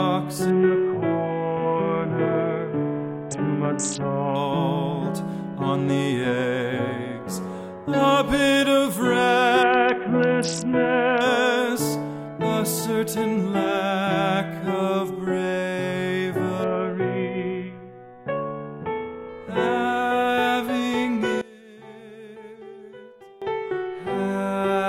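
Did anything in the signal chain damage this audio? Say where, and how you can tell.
Yes. Between 0.50 and 4.35 s, 9.63 and 11.21 s, and 16.64 and 19.29 s the treble goes dull and a gritty granular noise rises, then clears fully each time. That is a Bluetooth SBC bit pool drop at the codec stage over a wireless link, consistent with the bit pool falling from 31 to about 6, near 55 kbps. Starved upper sub-bands lose content and the rest is coarsely quantised. Unlike a plain low-pass or packet loss, nothing drops out. The band dulls while grain builds.

From 21.41 to 23.42 s the level falls by about 20 dB, and what remains is a faint residue rather than the same sound made quieter. This points to one channel inverted, most likely a polarity flip in wiring or at a playback mono sum. Material common to both channels cancels, and only their difference survives. A gain drop or dropout would keep the same tonal balance or go silent. 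Here the centred, full-bodied content vanishes and only a faint residue remains.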